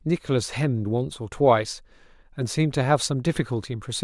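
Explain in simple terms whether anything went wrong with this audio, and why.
Nothing went wrong; no faults can be heard.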